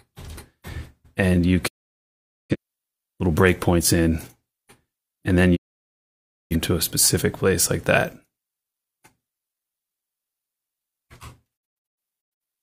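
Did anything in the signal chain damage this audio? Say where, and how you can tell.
Yes, a digital broadcast dropout at reception: the receiver muted while frames failed, fading out over 20 ms to silence at 1.67–2.56 s and 5.55–6.56 s, then short holes (longest 85 ms) across 11.56–12.42 s. Spectrogram: blank full-height columns; waveform: flat gaps.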